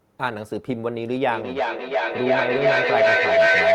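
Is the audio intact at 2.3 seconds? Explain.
No. At 2.3 seconds the speech sits under a feedback howl that starts at 1.3 s and runs to the end of the clip. Two devices in the same room are on one call, so the loudspeaker's output re-enters the microphone with more gain each pass. The repeats swell rather than decay and narrow to a tone around 700 Hz, pulsing roughly every 300 ms, and peak at about 8 dB above the speech.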